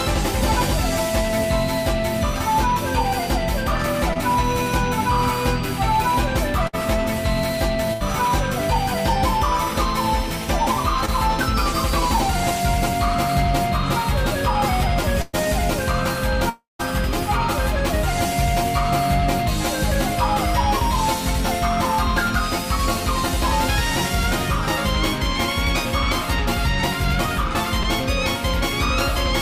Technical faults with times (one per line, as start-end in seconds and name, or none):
4.13-8.02 scattered short gaps
11.05-11.10 short concealed packet loss
15.22-15.35 burst of packet loss
16.49-16.81 long network dropout
27.83-27.86 short concealed packet loss